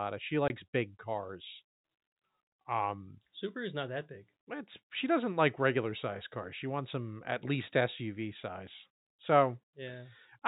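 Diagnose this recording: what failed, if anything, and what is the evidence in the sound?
Network: packet loss filled with silence, a 20 ms gap with hard edges at 0.48 to 0.50 s before "big cars", which fits one dropped packet zero-filled.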